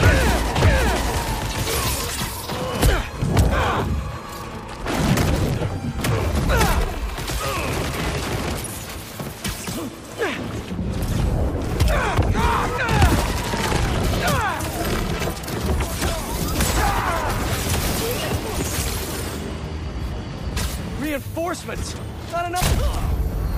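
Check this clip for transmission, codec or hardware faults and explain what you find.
One fault is present, a doubled audio track, already under way at the start and ending abruptly at 1.86 s. A second capture path likely lagged, mixing in an equally loud full-band copy about half a second late, without decay or room colour.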